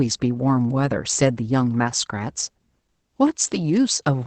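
Speech, muffled, hoarse and faintly robotic throughout, with nothing above 8.7 kHz: Opus voice compression in SILK wideband mode, at a rate fitting about 12 kbps.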